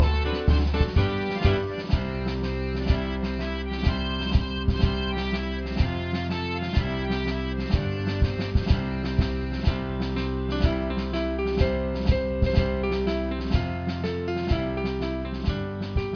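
No technical faults are audible.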